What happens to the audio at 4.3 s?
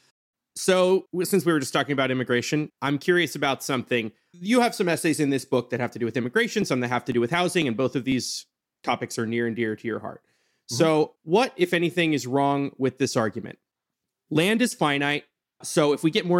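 Nothing goes wrong at 4.3 s: the speech runs straight through that moment intact, with no dropout, click, glitch or other fault to be heard.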